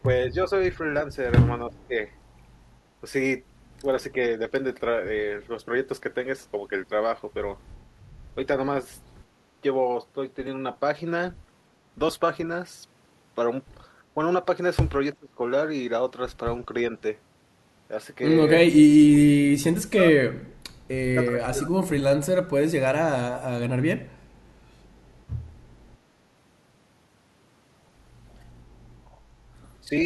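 The speech dips in level at 0.26–0.51, 1.68–1.94, 15.19–15.4, 18.84–19.25, 19.49–20.47, 21.25–22.33 and 29.84–29.94 s, slight at the edges but near 35 dB deep around 19–20 s. This is likely speech suppressed in double talk: an echo canceller mistaking the talker for echo and attenuating both.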